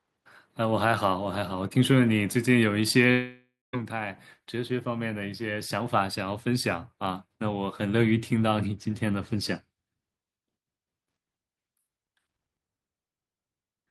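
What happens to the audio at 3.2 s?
From 3.11 s the speech trails into a fading buzz, falls silent, then returns at 3.75 s missing 0.62 s, likely a long network dropout.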